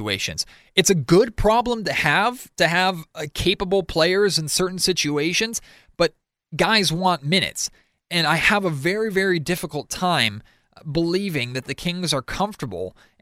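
Nothing in this bit of speech trips the ear as a technical fault at any point, so there's really nothing to flag here.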